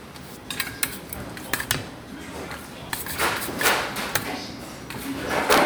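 At 0.43 s a brief glitch marks damaged data in a compressed stream: a corrupt frame throws the decoder out of sync until it finds the next frame header. Integer overflow follows at 0.83 s, where peaks pushed about 4 dB past the integer limit wrap to the opposite sign instead of clipping, giving a sharp crack. A longer burst of cracking runs from 1.54 to 1.71 s at the same overdrive. A second damaged-frame blip occurs at 2.90 s. Further overflow cracks come at 3.66 to 3.68 s and 4.15 s, both about 4 dB over, and from 5.51 to 5.58 s, where peaks exceed the limit by about 2 dB.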